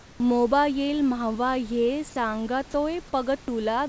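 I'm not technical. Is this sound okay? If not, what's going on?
No. For the first 0.2 s, before "मोबायील माव्हा ह्ये", the real room background is missing. It is replaced by comfort noise in place of the background. It is a steady, smoother noise, a little quieter than the real room sound. The likely cause is the call system going silent while nobody spoke. The receiving end then filled that gap with made-up noise. When the speech starts, the genuine room sound returns with it.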